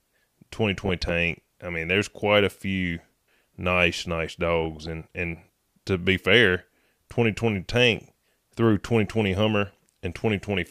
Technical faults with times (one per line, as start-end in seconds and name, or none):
0.86-1.11 DAB burbling
4.64-4.87 DAB burbling
7.96-7.99 DAB burbling